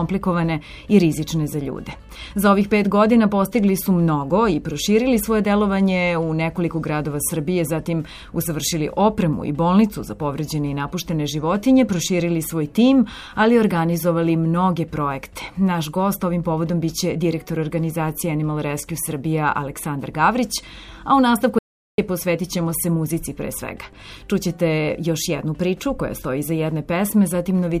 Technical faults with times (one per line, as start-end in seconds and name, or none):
21.59-21.98 audio dropout to silence